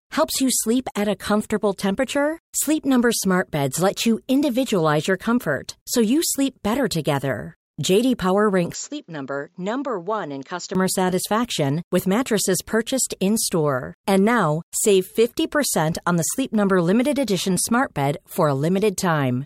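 From 8.74 to 10.75 s the speech turns dull and quieter, with nothing above 7.6 kHz and its own faint noise floor, likely an input switched to a poorer device rather than plain filtering.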